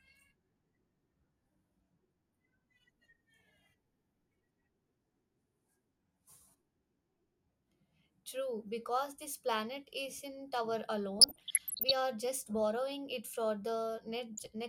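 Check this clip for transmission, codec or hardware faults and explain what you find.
DAB burbling occurs twice in this speech, from 11.19 to 11.91 s and from 14.37 to 14.46 s. Weak reception lets a small share of bit errors slip past error correction. Wrong samples put short blips of noise in single sub-bands.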